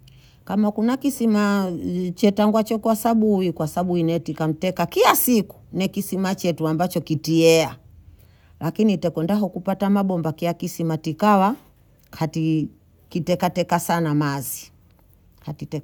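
No technical faults can be heard anywhere in the recording, with the speech signal arriving continuous and intact throughout.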